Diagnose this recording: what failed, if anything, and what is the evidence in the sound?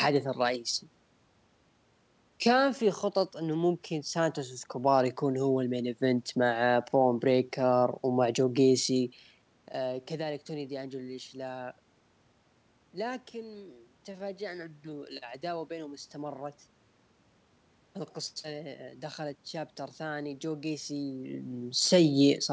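Nothing failed; no fault is audible anywhere.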